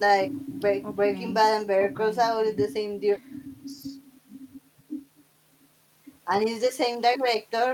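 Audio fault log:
throughout: clock drift between sender and receiver. The sender's clock runs about 4% slow, so the receiver's buffer keeps draining and has to be topped up with repeated bits.
0.12–7.57 s: repeated timing corrections. Short slices get repeated to cover the gap, adding roughly a third of a second and running at 97% speed.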